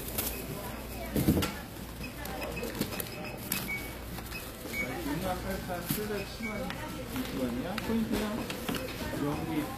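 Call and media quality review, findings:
Gritty, metallic treble throughout, plainly audible. Likely HE-AAC compression at a low bitrate, around 24 kbps: upper band rebuilt by spectral band replication, harmonics misaligned above crossover.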